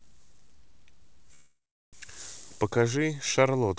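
From 1.34 to 1.95 s there's a call audio freeze. The speech decays into a fading buzz, then 0.35 s of silence, likely a starved jitter buffer, before resuming with nothing lost.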